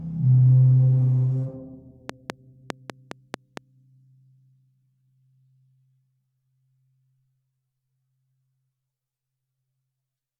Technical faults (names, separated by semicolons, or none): train of clicks